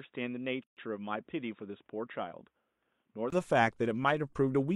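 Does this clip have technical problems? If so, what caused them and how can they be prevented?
Yes. From 0 to 3.32 s the speech sounds dull and boxy, with nothing above 3.8 kHz and the level about 5 dB lower. A faint new noise floor sits far below it, and a 20 ms silence comes before fuller sound returns. The likely cause is an input switched to a poorer device, such as a headset call profile, before switching back. Locking the input device before recording prevents this.

From 0.64 to 0.77 s a 131 ms silence cuts into continuous speech, with smeared edges, and the sound then resumes where it stopped. This is a gap at a join of encoded pieces: separately encoded segments were joined with each run's start-up delay and final-frame padding left in. Trimming encoder delay and padding, or encoding the recording as one continuous stream, prevents it.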